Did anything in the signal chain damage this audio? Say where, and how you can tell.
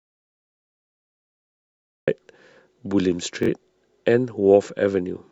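Yes. The clip opens in an audio dropout to silence that is already under way and lasts until 2.08 s. The waveform is a flat line and the spectrogram is solid black, with no room tone or noise floor, so this is digital silence rather than a quiet room. The most likely cause is a lost input at the device or link stage, with the recorder writing silence until the speech returns abruptly at 2.08 s.

A Bluetooth stutter follows on the wireless link, from 3.43 to 3.49 s. A short slice of speech repeats, giving a brief buzzy, machine-gun flutter. On the waveform the same small segment appears copied end to end, and on the spectrogram it shows as repeated vertical striping with hard edges. About 43 ms of signal is missing, which fits two lost packets of around 21 ms each. The receiver replayed its last buffer until new data arrived, and the speech then resumes further on rather than where it left off.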